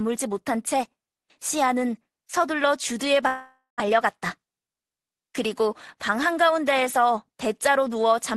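Long network dropout from 3.27 to 3.82 s in this speech recording, carried over a call link whose coding noise and top end near 12 kHz suggest Opus at a modest bitrate: the sound breaks into a concealment buzz that fades, then about 130 ms of near-silence. Around 400 ms of speech is lost, likely because packets stopped arriving and the receiver padded the gap. Jitter buffer speed-up then follows from 3.89 to 5.28 s: the speech runs about 8% fast at unchanged pitch and sounds hurried, as short pitch-period slices are trimmed to drain roughly a tenth of a second of extra buffered delay.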